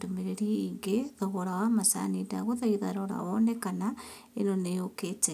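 A short speech recording with no technical faults to report. Nothing in it needs a time stamp or a cause.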